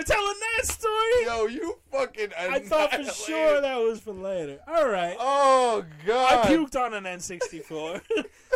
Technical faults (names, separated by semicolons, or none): none